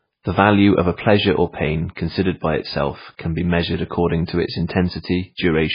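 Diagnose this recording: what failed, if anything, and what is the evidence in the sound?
The codec stage is the likely culprit: this speech sounds like heavy MP3 compression throughout. Nothing survives above 5 kHz, and the remaining band is watery and swirly, with weak components flickering in and out between frames and sibilants turning into metallic chirps. A starved bit budget, which fits a very low rate around 16 kbps, forces that hard treble cut and zeroing. A simple low-pass filter or narrowband line would lose the top cleanly without the swirling.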